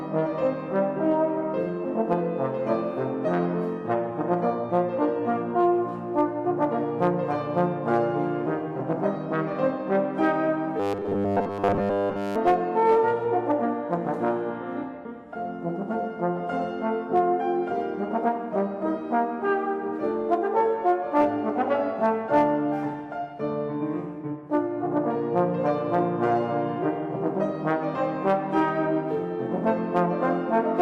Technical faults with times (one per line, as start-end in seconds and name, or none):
3.73-5.73 adaptive stream at a lower bitrate
10.80-12.36 robotic sound from repeated short buffers